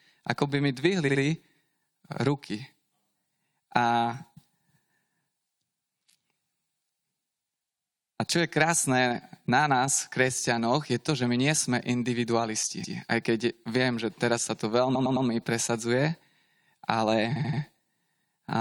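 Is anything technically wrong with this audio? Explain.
Yes. The speech stutters four times: a 64 ms piece played twice more at 1.08 to 1.20 s, 128 ms once more at 12.83 to 12.96 s, 107 ms three more times at 14.94 to 15.26 s just after "že teraz sa to", and 85 ms three more times at 17.35 to 17.61 s. These are repeated frames: the decoder replays a run of compressed frames, lengthening the audio each time.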